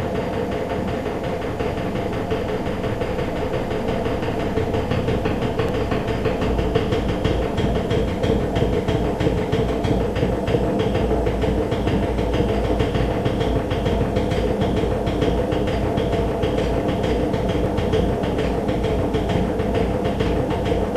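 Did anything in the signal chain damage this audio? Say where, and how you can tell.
Yes. The damage is most likely at the driver or buffer stage, where the recorder works in fixed blocks and drops a sliver each time it closes one and opens the next: audio missing between chunks. Three abrupt skips land at 5.69, 11.67 and 17.66 s, evenly spaced about 6 s apart. Each removes only around 15 ms, and the sound on either side is butted together with no silence, so it jumps forward rather than pausing.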